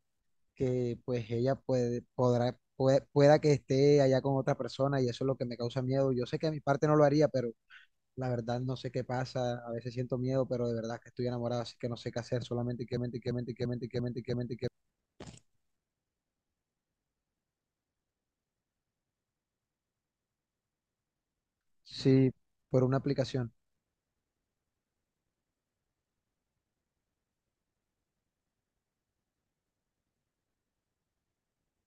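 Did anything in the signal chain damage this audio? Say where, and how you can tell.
Yes, there is a system hang loop at the driver/buffer stage. From 12.97–14.68 s and 19.46–21.16 s, one 341 ms segment stutters five times, which fits a frozen 16384-sample ring buffer.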